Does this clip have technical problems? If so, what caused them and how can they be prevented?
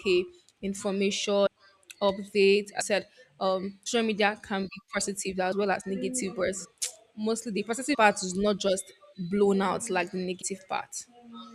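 Yes, compressed frames skipped at 1.45, 2.80, 3.85, 5.51, 6.64, 7.93 and 10.41 s. Runs of 24 ms frames drop out, jumping roughly 100 to 300 ms ahead. Use a reliable transfer with error checking so no frames arrive damaged or missing.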